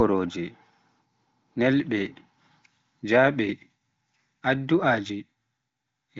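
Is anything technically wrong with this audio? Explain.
No, nothing is technically wrong.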